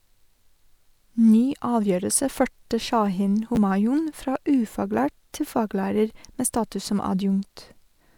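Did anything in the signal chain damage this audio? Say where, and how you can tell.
Yes, around 3.55 to 3.57 s in the driver or buffer stage there's a brief jumbled moment: chunks out of order, one 10 ms chunk landing a slot late, leaving three hard joins.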